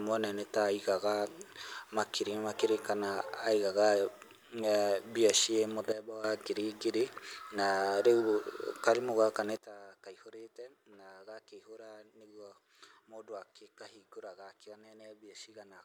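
At 5.92 s the speech and the background noise drop together by about 12 dB in a single step, stay there until 6.24 s, then snap back just before "ngiri ngiri na". At 9.57 s it happens again, deeper this time, about 20 dB down, and it stays down to the end. Both are sudden gain jumps, likely a gain setting applied instantly with no ramp, so the level steps rather than fades.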